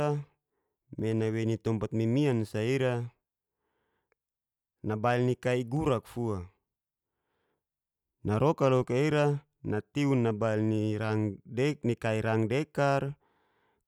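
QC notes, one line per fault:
0.99 s and 5.77 s (just after "nabail ni kai"), dropped samples: a tiny piece of the speech stream, a fraction of a millisecond each time, is likely missing, so the waveform steps straight from one value to a later one instead of moving smoothly between them. That sudden discontinuity is far too brief to take away any audible sound. It is heard as a single sharp click at each point, and shows as a thin vertical line across the spectrum.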